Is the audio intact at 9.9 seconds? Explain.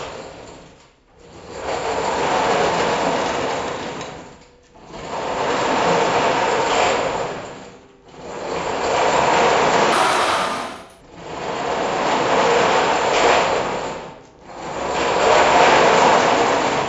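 No. From 9.92 to 11.01 s the sound runs fast and high, about 1.38 times speed and 5.55 semitones up. This is a wrong sample rate: audio captured at 16 kHz is played back at 22 kHz without conversion, so speed and pitch rise together.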